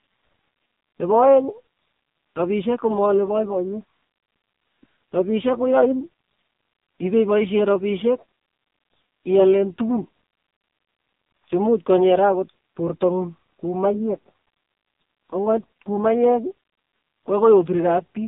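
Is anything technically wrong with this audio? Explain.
Yes. Throughout the speech there is AMR narrowband mobile codec damage: the band runs about 200 Hz to 3.7 kHz with nothing above 3.8 kHz, and the heavy buzzy, synthetic texture fits a low mode near 5.9 kbps, where too few pulses drive the vocal-tract model. Unlike a simple telephone band-limit filter, it also rebuilds the voice coarsely rather than only narrowing it.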